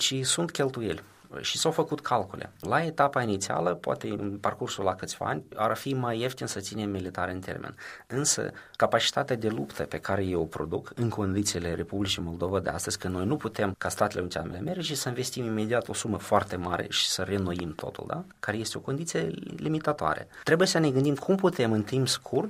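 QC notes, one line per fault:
17.59–17.81 s, loud pop: two sharp pops about 10 dB above the sound, which continues underneath, likely a sudden voltage spike from a plug, switch or static.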